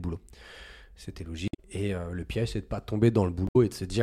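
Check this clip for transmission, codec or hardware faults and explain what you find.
Two faults turn up in this speech clip, both of the same kind. Damaged data in a compressed stream, at 1.45 to 1.59 s and 3.47 to 3.56 s: corrupted bytes make the decoder misread frames and hunt for the next header, producing a brief chirp, squawk, click or short hole.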